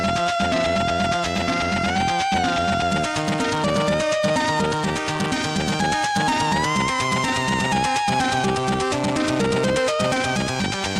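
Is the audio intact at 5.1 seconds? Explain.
Yes, the audio is intact at 5.1 seconds, with no dropout, click, distortion or other fault audible at that moment.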